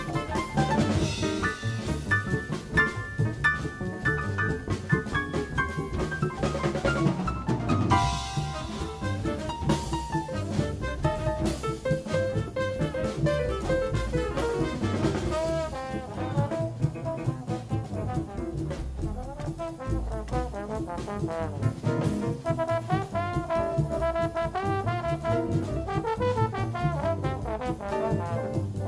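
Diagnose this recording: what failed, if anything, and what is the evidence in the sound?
Nothing failed: no stage in the chain, from analogue wiring through conversion, buffering, processing and transmission to playback, leaves any audible trace in this recording.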